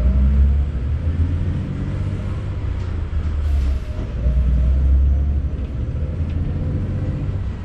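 Throughout, the sound is watery and swirly, with smeared attacks. This is likely MP3 compression at a low bitrate, around 64 kbps.

At 2.60 s, compressed frames are skipped. A few frames go unplayed, so the audio jumps ahead about a tenth of a second, joined by a brief smeared blip.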